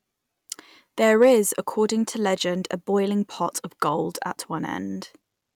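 Hard clipping occurs from 1.22 to 1.33 s, a burst of about a tenth of a second. During that stretch the speech peaks exceed what some stage in the chain can pass, overdriving it by about 2 dB, so the tops of the waveform are sheared flat. Those squared-off peaks generate harmonics high in the spectrum, and because the overload is slight, the result is a brief crackle riding on the loudest moments rather than a sustained fuzz.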